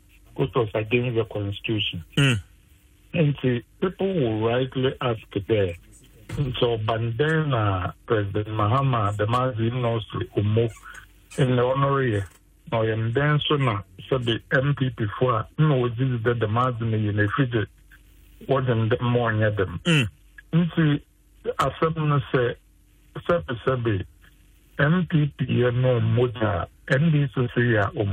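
No technical faults are audible.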